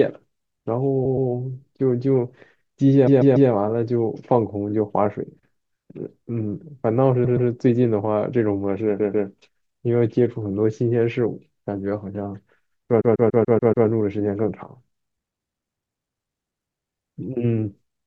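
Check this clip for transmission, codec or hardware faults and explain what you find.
Repeated frames: short blocks of compressed speech were delivered more than once, so the decoder replays them. Stutters occur at 1.05–1.29 s, 3.06–3.49 s, 7.24–7.48 s, 8.99–9.28 s and 13.00–13.86 s, each repeating a 120 or 144 ms chunk and lengthening the clip.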